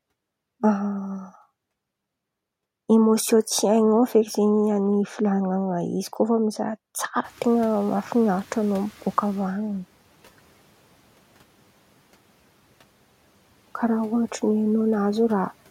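Noise suppressor catching up, from 7.24 to 9.6 s in this speech clip: room background noise jumps by about 24 dB just after 7 s. The suppressor's noise estimate lags, so the noise first passes with little reduction, then sinks by about 10 dB over 2.36 s as the estimate adapts.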